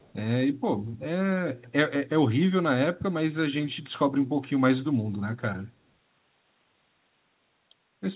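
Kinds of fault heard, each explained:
Echo leak: at 0.0 to 0.13 s, a very faint copy of the speech trails by 182 ms, likely loudspeaker pickup that the far-end echo canceller missed.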